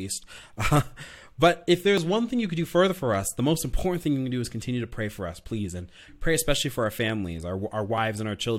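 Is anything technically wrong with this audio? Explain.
Yes. Overlap between stream segments occurs at 1.98 s and 7.98 s, at boundaries of 2-second segments. Adjacent segments' timestamps overlap, so the player discards speech that was never duplicated, about 19 ms and 6 ms. The waveform jumps, heard as a brief click or skip.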